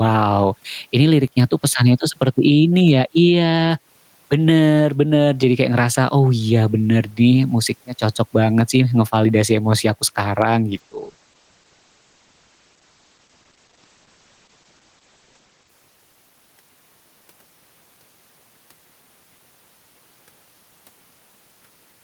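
Gain pumping runs through the whole speech clip: the level ducks by around 10 dB under loud sounds, likely from excessive gain feeding a fast limiter.

A call bitrate drop from 10.7 to 16.53 s makes the speech coarse and muffled, with highs cut from 20 kHz to 8 kHz for about 4.8 s, consistent with encoding falling from roughly 32 to 11 kbps.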